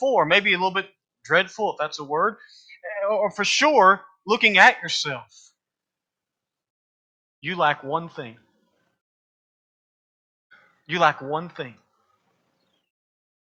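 No technical faults can be heard anywhere in the recording; the signal stays stable and intact throughout.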